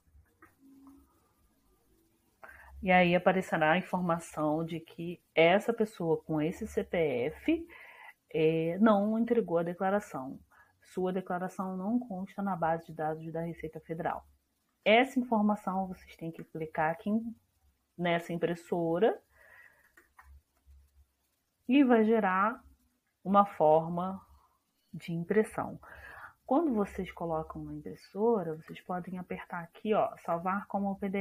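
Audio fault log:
No technical faults can be heard anywhere in the signal.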